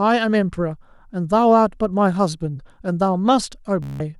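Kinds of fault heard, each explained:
Bluetooth stutter: near 3.83 s a short slice repeats as a buzz for 0.17 s, rather than a dropout's silence, then speech resumes further on.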